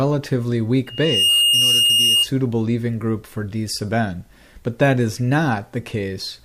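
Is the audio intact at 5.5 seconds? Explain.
Yes, at 5.5 seconds the audio is intact, with no dropout, click, distortion or other fault at that moment.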